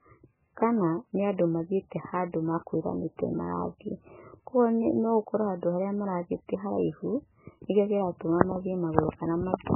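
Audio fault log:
Throughout, MP3 compression: the encoder was likely starved of bits, at a rate pointing to around 8 kbps, so it discarded everything above 3 kHz and zeroed the weaker frequency lines in each frame. The speech is dull and band-limited, with sibilants and consonant detail missing. Because the surviving lines switch on and off from frame to frame, the damage is heavy: a watery, swirling texture runs through the voice and onsets smear.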